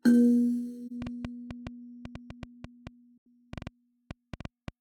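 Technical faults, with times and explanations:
0.86–0.91 s, AAC frame loss with muting: one frame of the music, about 43 ms, drops out. The decoder had no data for it and filled its spectrum with zeros. The overlapping transform windows on each side fade the sound down into the gap and back up out of it, so it is heard as a brief soft-edged dip rather than a hard cut.
1.02–4.69 s, train of clicks: a run of about twenty short, similarly shaped clicks ticks over the music at an uneven pace, averaging about 5.7 per second. The loudest peaks stand roughly 5 dB above the music. The steady repetition of one pulse shape over more than three and a half seconds likely comes from electrical interference from nearby equipment or a faulty connection or power supply injecting spikes into the signal.
3.18–3.26 s, AAC frame loss with muting: a longer gap, two consecutive frames or about 85 ms, goes silent in the same way, with a smooth fade out and in from the window overlap. 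It is twice as long as the earlier dropout, and clicks from the ongoing train continue on either side of it.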